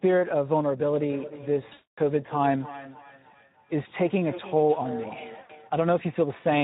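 A speech clip coded throughout with the Speex codec, with plainly audible damage consistent with a rate around 11 kbps. It sounds hoarse and noisy, and a spectrogram shows smeared, grainy harmonics. From 1.0 to 5.75 s there is feedback echo between two devices: the speech returns roughly every 0.3 s, up to about 14 dB below the direct sound. On a spectrogram this appears as fainter, evenly spaced ghost copies of each syllable. VoIP packet loss concealed by the speech codec occurs from 1.69 to 1.99 s, with 260 ms lost and the longest gap 240 ms, and again from 5.41 to 5.52 s, with 80 ms lost. In both places the sound stretches into a fading buzzy tone or coloured noise, visible as flat, decaying bands.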